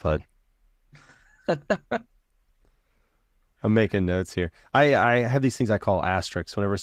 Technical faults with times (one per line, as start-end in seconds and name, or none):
none